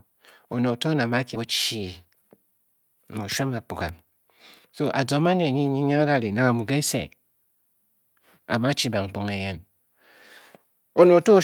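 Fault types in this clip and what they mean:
Skip ahead: Right after "one oto nang a" at about 1.35 s, the speech jumps forward with no gap. Something like 0.7 seconds of queued audio got dropped, so the two sides butt straight together and that chunk of speech is just gone.
Jitter buffer speed-up: From 1.75 to 3.44 s the buffer is trimming its backlog by cutting tiny pitch-period slices over and over. The speech runs at 108% speed with unchanged pitch, losing roughly 150 ms overall, so it sounds slightly rushed.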